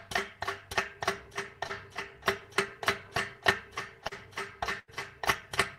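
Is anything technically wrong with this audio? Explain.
Yes. At 1.67 to 1.71 s and again at 4.07 to 4.13 s, the sound briefly smears and wobbles. This is short concealed packet loss. About 20 ms and then 40 ms of audio arrived too late, and the receiver patched each hole by extending the preceding sound before rejoining the real signal.

At 4.79 to 4.90 s, the sound stretches into a held, fading tail before jumping ahead. This is a burst of packet loss. Roughly 80 ms went missing, and the receiver continued and faded the last sound for about 84 ms, so that stretch is lost.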